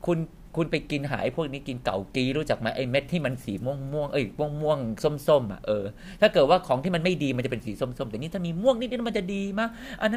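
Listening to this speech recording, nothing technically wrong stood out at any point.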